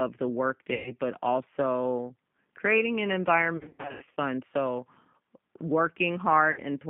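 Throughout, the G.729 codec rebuilds the speech from a vocal tract filter and sparse pulses, consistent with 8 kbit/s, inside a 150 Hz to 3.6 kHz line band. This leaves the speech plainly rough and synthetic.

VoIP packet loss concealed by the speech codec occurs three times. At 0.74 to 0.94 s, 120 ms is lost. From 3.57 to 4.19 s, 400 ms is lost, scattered over 600 ms. At 6.51 to 6.60 s, 60 ms is lost. Each time the decoder extends its last frame into a fading buzzy tone or coloured noise, and the speech stays weak afterwards.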